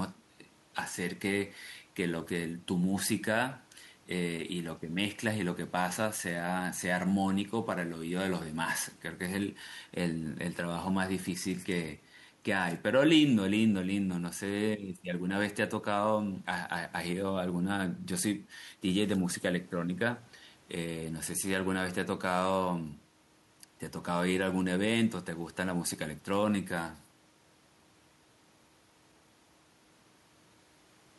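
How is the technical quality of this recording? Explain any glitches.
The technical quality of this recording is sound, with no glitches to explain.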